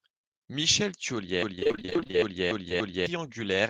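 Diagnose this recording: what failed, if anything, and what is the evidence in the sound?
From 1.43 s to 3.06 s a fragment of about 0.28 s repeats back to back, six times over, a broken-record loop. Likely a stalled player or stream that kept resending its last buffered fragment, so the speech due in that stretch is simply gone.

Inside that, from 1.55 s to 2.15 s, there's repeated packet loss with a robotic sound on the network side: sixteen short holes, the longest about 22 ms, each patched by stretching the last sound. Nearly half the span is filled in, hence the choppy texture.

Then 2.18 s to 2.63 s drags slightly, a jitter buffer slow-down. The receiver repeated pitch periods to rebuild its reserve, adding about 36 ms, so playback runs at roughly 94% speed with the pitch unchanged and sounds a little drawn out.

Finally, at 2.69 to 2.72 s, a short concealed packet loss: about 20 ms never arrived in time and got patched by continuing the previous sound before blending back in. 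You hear it as a quick smear or wobble.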